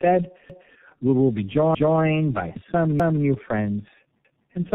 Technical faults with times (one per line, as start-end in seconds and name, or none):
0.00-4.75 tandem speech coding
0.50-0.75 overlapping chunks
1.75-2.00 overlapping chunks
3.00-3.25 overlapping chunks
4.25-4.50 overlapping chunks